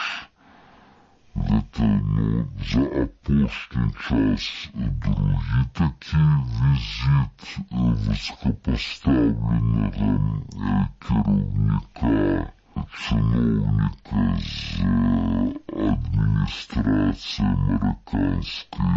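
From start to end, a wrong sample rate plays everything at half speed and a full octave low, which fits 44.1 kHz material played back at 22 kHz.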